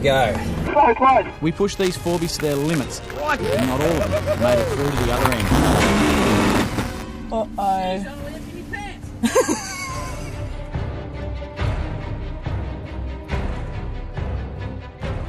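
From 1.76 to 7.03 s there is buffer tearing: writer and reader have slipped, leaving a small slice of each buffer holding audio about 10 ms stale. It heard as a 200 Hz robotic buzz, showing as evenly spaced waveform discontinuities and vertical spectrogram striations.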